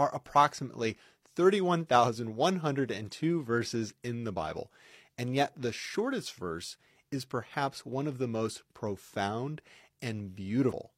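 A speech recording with one fault near its end: damaged data in the compressed stream, heard as a brief chirp, squawk, click or short hole from 10.68 to 10.73 s, lasting about 48 ms. At that point the encoded bytes are corrupt, so the decoder cannot parse the affected frames correctly. It produces garbage output or drops them, then has to regain sync by scanning for the next valid frame header before normal decoding resumes.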